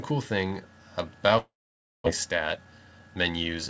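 From 1.38 to 2.08 s the sound breaks off. The last sound is stretched into a buzz that fades, then about 0.55 s of near silence follows, and roughly 0.4 s never returns. This is likely a long network dropout. On a spectrogram, smeared bands decay into a blank gap, with nothing above 8 kHz throughout, as expected from the G.722 call path.

From 2.26 to 3.59 s a jitter buffer speed-up follows. Short pieces one or a few pitch periods long are cut out repeatedly, shedding around a fifth of a second of built-up delay. The sound runs hurried at 114% speed with unchanged pitch. The waveform looks squeezed in time, while harmonic spacing stays level on the spectrogram.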